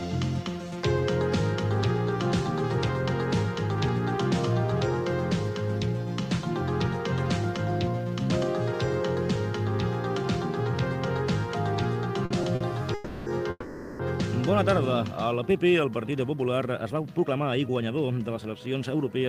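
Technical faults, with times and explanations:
12.25 s and 12.55 s, short stall from a late packet: each time a packet failed to arrive on schedule, the jitter buffer emptied and the receiver held the last sound for about 50 ms until the packet turned up, then resumed exactly where it had paused. Nothing is lost, but a sound lingers slightly too long with a faint buzz or dip, and each stall adds 50 ms of delay to the playback.
12.94–13.28 s and 13.50–14.01 s, call audio freeze: packets were most likely held up in transit, leaving the jitter buffer dry, so the receiver stretched the last sound into a fading buzz or hiss while it waited. The first hold lasts about 320 ms, the second about 490 ms, which decays for its final 20 ms or so into silence. Playback then continues from the same point, so the audio gains gaps rather than losing material.
16.11–19.25 s, jitter buffer speed-up: after the stalls, the jitter buffer held more audio than its target, so the receiver worked the backlog off by repeatedly cutting out tiny pitch-period-length slices. 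Across these three seconds, roughly three tenths of a second is trimmed away, and the sound plays at about 110% speed with its pitch unchanged, giving a hurried, slightly rushed quality until the delay is back down.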